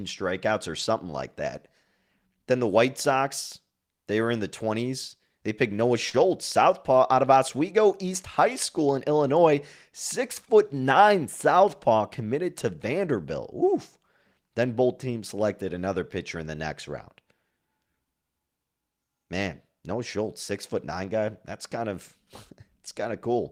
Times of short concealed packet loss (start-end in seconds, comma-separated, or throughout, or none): 6.09-6.15, 10.45-10.49